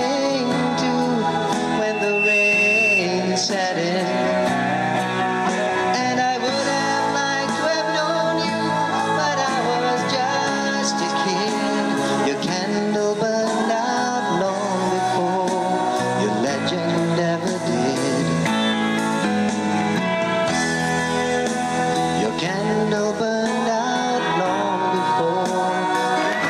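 Throughout the recording the level breathes, a swing of around 5 dB, so loud and quiet passages sit unnaturally close together and the whole thing sounds squashed. This gain pumping is likely caused by the input gain being set far too high and a fast limiter or compressor clamping it down on every peak. From 1.74 s to 3.06 s a loudspeaker feedback squeal takes over, a single tone near 2.7 kHz that grows over roughly half a second and settles somewhere around 5 dB above the rest of the audio before it stops. The microphone is hearing the loudspeaker it feeds, and at that one frequency the loop gain exceeds unity, so the tone keeps reinforcing itself.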